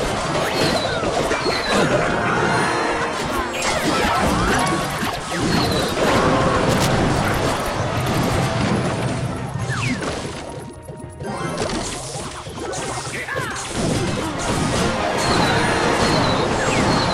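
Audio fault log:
6.69–6.89 s, cable scratch noise: a burst of dense, uneven scratching lasting about 0.2 s, only a little quieter than the sound beneath it. This is likely a worn cable or connector being moved, its contact resistance fluttering rapidly; unlike a single click, it is a rough, rustling cluster.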